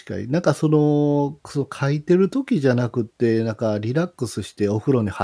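No dropouts, clicks, distortion or other transmission or processing faults can be heard anywhere in the speech.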